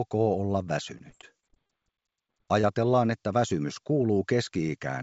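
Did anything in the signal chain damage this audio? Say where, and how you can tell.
Yes. Repeated packet loss (robotic sound) from 0.98 to 1.80 s: a network fault. Eight short gaps, none over 30 ms, were patched by stretching the previous sound, leaving choppy stuttering.

Short concealed packet loss at 2.27 to 2.30 s and 2.61 to 2.65 s: about 20 ms each went missing in transit, and the concealment papered over them, causing brief smears.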